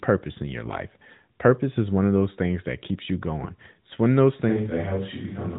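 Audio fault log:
0.64–0.82 s, AMR bit errors: Just after "purpose in your", the sound turns hoarse, scratchy and gargly for a stretch that fits about eight 20 ms frames, while pitch and level roughly hold. Around 7 percent of the weakly protected bits in these frames arrived flipped, but the check on the important bits still passed. The excitation pulses therefore land in the wrong positions, and the fine pitch, gain and spectral values decode wrongly.
4.50 s to end, switch to a distant microphone: After "one of those", the sound abruptly becomes roomy and hollow, with thinner bass, a level drop of about 5 dB, and room noise that rises to about 25 dB below the speech. It stays this way to the end. The likely cause is that the close microphone's feed dropped out and a farther microphone took over. That microphone picks up more reflections and ambient noise relative to the direct sound, and it sits outside the close-proximity bass boost.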